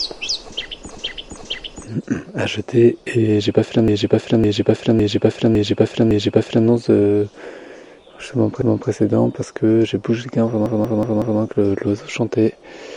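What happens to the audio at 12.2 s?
Nothing goes wrong at 12.2 s: the sound plays through that moment intact, with no dropout, click or distortion.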